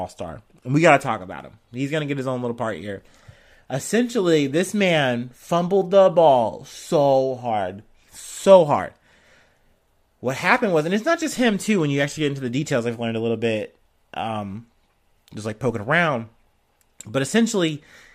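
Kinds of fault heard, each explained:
No kinds of fault are heard in this clip.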